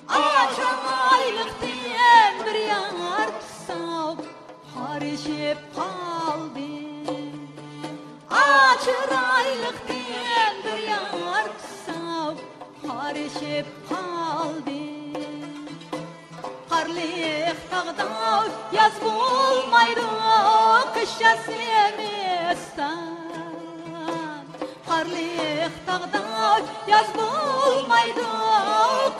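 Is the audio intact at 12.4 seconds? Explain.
No, at 12.36 s compressed frames are skipped: about two 23.2 ms frames never play, so roughly 50 ms is lost and the audio jumps with a brief smeared blip.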